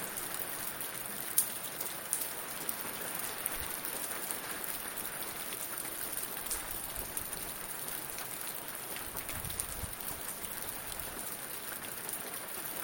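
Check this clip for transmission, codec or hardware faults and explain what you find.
Nothing stood out on listening to this recording; I heard no transmission, codec or hardware trouble anywhere in the sound.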